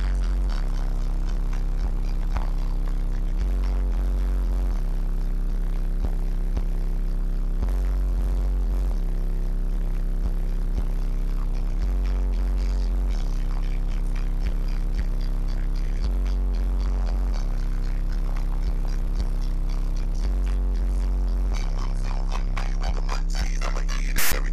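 At 24.18 s the decoder stops treating the data as audio and plays a block of file tags through as if it were samples: file tags played as audio. The text bytes come out as a loud, buzzing rasp pushed off to one side, because character codes cluster in a narrow range rather than centring on zero, and the zero padding that follows drops straight to silence. The whole burst lasts about 0.15 s, ending at 24.33 s, with hard edges at both ends.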